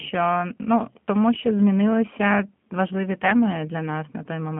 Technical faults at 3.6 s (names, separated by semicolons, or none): G.729 codec